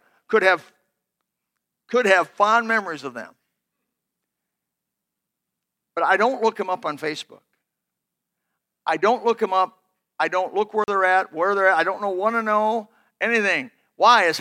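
A block of digital silence interrupts this speech clip from 10.84 to 10.88 s, a 40 ms stretch where the sound drops straight to silence. With no fade in or out, the waveform jumps to silence and back. At this length it registers as a brief hole rather than a single tick. A cut this abrupt suggests the output buffer was not refilled in time.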